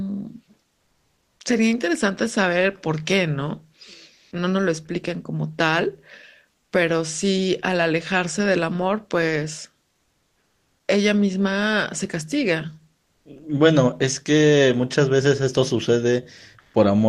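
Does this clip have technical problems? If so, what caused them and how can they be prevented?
Yes. Comfort noise replaces the background in the pauses at 0.77–1.39, 4.13–4.31, 9.97–10.87, 13.03–13.25 and 16.59–16.73 s. A steady, featureless hiss stands in for the real room sound. At 9.97 s it is about 8 dB quieter. The likely cause is Opus discontinuous transmission. Turning DTX off in the sender's codec settings would keep the real background.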